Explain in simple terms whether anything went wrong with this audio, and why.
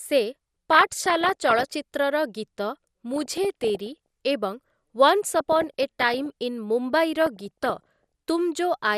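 Two things went wrong with this speech. The whole clip sounds dull, with a grainy, gurgling edge to it. That is most likely MP2 compression, the audio format used by digital radio. It splits the sound into many narrow slices and gives each a small share of data. When the data runs short, the highest slices get switched off and the rest turn rough. That is why the top end sounds muffled.

On top of that there is DAB burbling, in four bursts: from 0.71 to 1.70 s, 3.13 to 4.06 s, 5.31 to 6.26 s, and 7.21 to 8.04 s. It puts short blips of noise over the speech. It happens when the radio signal is weak. Some data arrives damaged, and the error correction cannot fix it all. The damaged values then put short blips of noise into single slices of the sound.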